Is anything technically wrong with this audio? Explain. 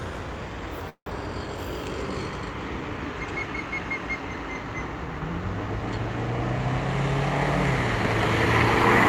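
Yes, there's a call audio freeze from 0.89 to 1.08 s. The last sound hangs on as a fading buzz or hiss, then about 80 ms of silence, before playback resumes right where it left off. That's likely delayed packets draining the jitter buffer, leaving everything after running about 168 ms late, with nothing actually lost.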